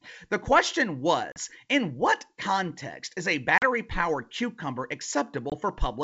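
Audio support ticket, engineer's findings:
Packet loss on an ADPCM call: hard-edged silent holes at 1.32–1.39 s, 3.58–3.64 s, 5.50–5.53 s (about 40, 40, 20 ms, roughly two, two, one packets). Waveform shows flat gaps. Spectrogram shows blank vertical bands. G.722 decoder predictor and step size desync, then re-converge.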